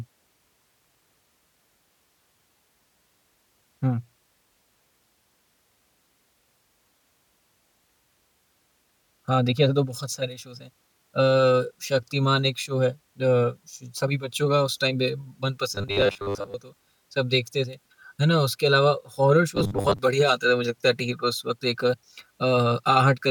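Speech, with robotic sound from repeated short buffers at 15.75–16.54 s and 19.56–19.99 s: the voice turns into a rigid metallic buzz near 100 Hz, likely from audio arriving too seldom and a 10 ms buffer being repeated, replacing most, then about half, of the real audio.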